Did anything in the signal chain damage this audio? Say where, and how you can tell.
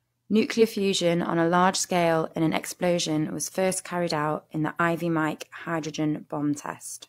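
Yes. The damage sits at the codec stage: there is damaged data in the compressed stream, so the decoder hits frames it cannot read correctly, loses sync and hunts for the next valid frame header. That shows up as two short glitches in the speech, a blip from 0.58 to 0.63 s just before "fusion on a large" and another from 4.76 to 4.80 s just after "carried out in the", each roughly 45 to 50 ms long.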